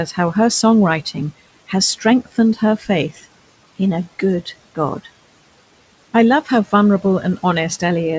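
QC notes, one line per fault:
2.78–2.87 s, speech cut by the noise suppressor: speech briefly dips about 10 dB and sounds swallowed, because the suppressor treated it as noise.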